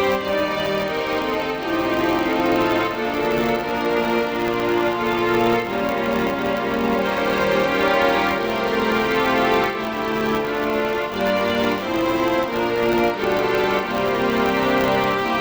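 A filter restarted on every block runs through the whole recording: its memory is cleared at each block boundary, so it starts from silence 100 times a second, which points to blocks of about 10 ms. Each restart leaves a small transient, heard as a 100 Hz buzz that rises and falls with the level.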